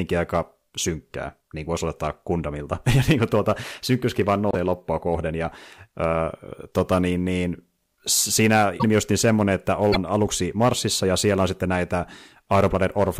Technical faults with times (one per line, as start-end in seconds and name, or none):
4.51-4.55 broken MP3 bit reservoir
8.79-8.84 broken MP3 bit reservoir
9.91-9.96 broken MP3 bit reservoir